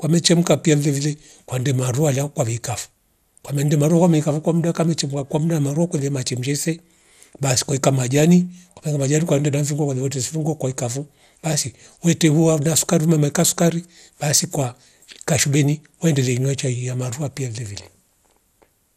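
Speech throughout, with plainly audible gurgly, granular smearing and nothing above 15.8 kHz, likely MP2 compression at a low rate, something like 80 kbps.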